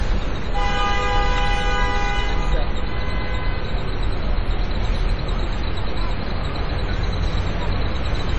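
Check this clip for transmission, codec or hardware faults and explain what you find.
One codec fault runs through the whole clip. MP3 compression, heavy, throughout: the damage fits a low bitrate of about 32 kbps. The encoder, short of bits, likely cut everything above 10 kHz and discarded weak frequency lines, which then switch on and off from frame to frame. The result is dull, band-limited audio with a watery, swirling texture, metallic chirping, and transients smeared so attacks lose their edge.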